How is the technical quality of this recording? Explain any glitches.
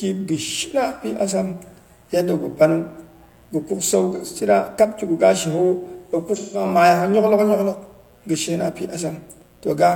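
The recording has two problems: a continuous mains buzz and two brief dropouts that sound like AAC frame loss with concealment.

Mains buzz runs throughout at 60 Hz, roughly 35 dB below the speech. Sharp switching spikes from a dimmer, rectifier or unshielded line stack up harmonics into the kilohertz range, giving a raspy buzz. A spectrogram shows evenly spaced horizontal lines at 60 Hz multiples.

AAC frame loss with concealment occurs at 4.14 to 4.26 s, between "gɨ kuk sau" and "shina kab", and again at 6.36 to 6.65 s. The decoder rebuilt missing frames from the last good spectrum, so each gap sounds smeared and phasey. The lengths fit about two and four lost frames. On a spectrogram, each gap appears as a blurred, texture-less block.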